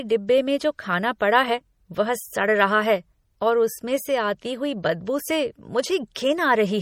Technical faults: MP3 compression

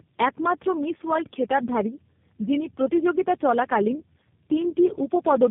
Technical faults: tandem speech coding

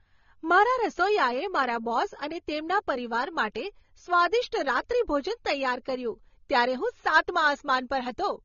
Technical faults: transcoding between lossy codecs

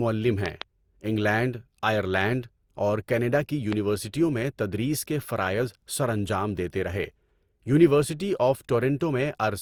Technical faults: generation loss; loud pop

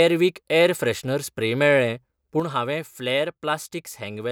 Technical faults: sudden gain jump

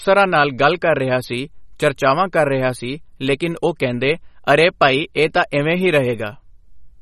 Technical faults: MP3 compression

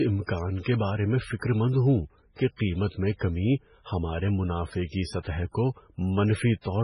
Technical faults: MP3 compression; pre-echo

